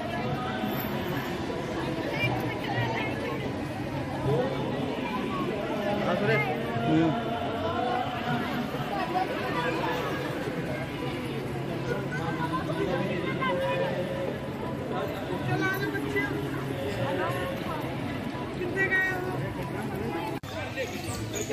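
From 19.79 s to the end at 21.53 s, computer activity noise appears: a buzzing, chirping texture pulsing at around 100 times a second and sitting roughly 30 dB below the sound. Shifting processor or graphics load disturbs the ground shared with the audio circuitry, so the noise follows the machine's activity rather than the audio. On a spectrogram it shows as a comb of evenly spaced harmonics and fine vertical ticks, and the waveform carries a faint, regular ripple.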